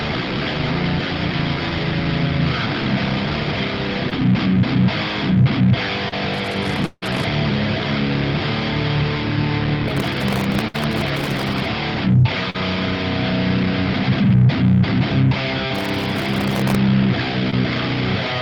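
The audio came through a call path whose coding noise and top end, which stops near 12 kHz, fit a low-rate Opus call. Short concealed packet loss occurs four times: 4.09–4.13 s, 6.09–6.14 s, 12.50–12.56 s and 17.50–17.54 s. Each hole is 20 to 40 ms. The decoder never got that audio in time. It filled the gap by extending the last sound, then blended back. Each one is heard as a brief smear or wobble. Processor overload crackle comes in three bursts: 6.34–7.24 s, 9.88–11.65 s and 15.76–16.76 s. The grit points to a buffer well under a millisecond long. The processor kept missing its deadlines, from dozens of times in the first burst to over a hundred in the second. Each miss replayed a scrap of old audio with hard edges. Together they make a gritty tearing over the sound that stops when the load eases. Inside the first crackle, from 6.86 to 7.04 s, the sound turns into a buzz or hiss that fades to a short silence, then returns further on. 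About 160 ms is simply gone. This is likely a long network dropout, with the receiver stretching the last sound until it ran out. At 10.68–10.76 s, within the second crackle, a burst of packet loss removes about 60 ms. The receiver carried the last sound forward and turned it down. It is heard as a brief fading buzz or hiss, and the audio then picks up past the missing part.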